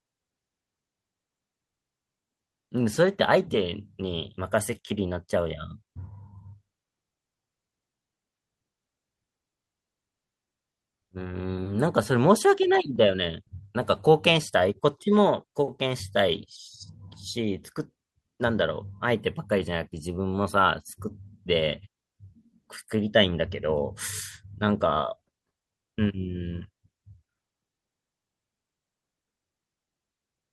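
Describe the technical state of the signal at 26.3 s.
At 26.3 s the speech signal is intact, with no technical fault present at that moment.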